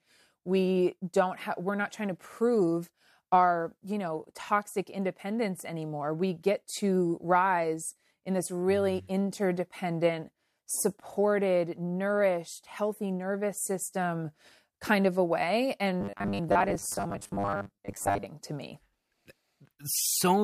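From 16.01 to 18.25 s the speech takes on a robotic sound from repeated short buffers, a rigid metallic buzz near 100 Hz that still loosely tracks the speech. The likely cause is a roughly 10 ms block being replayed while fresh audio lags, with about half the material repeated. On a spectrogram this appears as evenly spaced horizontal lines at multiples of 100 Hz, and the waveform shows identical 10 ms segments repeating.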